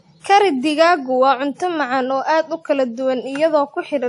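Transcoding between lossy codecs runs through the whole speech clip: nothing is heard above 11.1 kHz, and two layers of smeared, swirly coding artefacts sit on top of each other. This likely comes from an MP3 pass followed by WMA, both around 48 kbit/s, with the second codec spending bits on the first one's damage.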